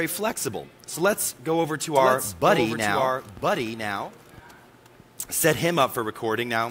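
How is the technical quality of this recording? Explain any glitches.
A doubled audio track runs from 1.96 s to 4.40 s. A second full-band copy trails by about a second at roughly 5 dB down, with no decay or room colour, and it starts and stops abruptly. Two out-of-step copies, likely from an edit or a second slower capture path, are summed together.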